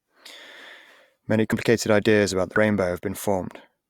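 At 2.56 s, compressed frames are skipped: roughly 40 ms of speech vanishes, and the waveform jumps ahead by the length of the missing frames.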